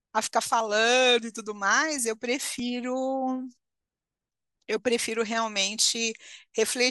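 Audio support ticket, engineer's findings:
Overlap between stream segments. Segment timestamps overlap at boundaries, about 2 s segments. Player trims the overlap, discarding speech that was never actually duplicated. Symptom: waveform discontinuity heard as a click or tiny skip, at 0.61 s and 2.59 s. Losses about 14 ms and 6 ms. Spacing near 2 s matches segment length, pointing at the segmenter or packager timestamping, not the decoder.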